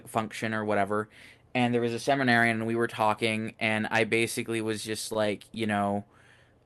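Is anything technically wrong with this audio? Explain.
Yes. From 5.13 to 5.81 s, just after "I basically was just", the speech shows repeated stalls (stutter). Packets reached the jitter buffer late, so it ran dry five times and the receiver stretched the last sound to bridge each gap, about 55 ms in all, the longest 18 ms, with nothing actually lost. The speech briefly drags and catches. On a waveform and spectrogram, short held or smeared segments interrupt the speech, whose energy stops near 12 kHz, consistent with the Opus call codec.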